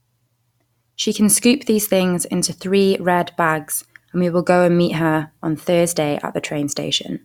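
Nothing in this speech recording stood out as a technical problem on listening.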